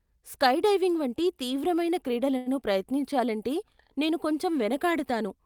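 A speech recording in which, from 2.37 to 2.48 s, one sound is held unnaturally long with a faint buzzy flattening, then picks up exactly where it left off. This is a short stall from a late packet: the jitter buffer ran dry, so the receiver stretched the last audio for about 87 ms until the data arrived. Nothing is lost, but everything after it runs 87 ms later.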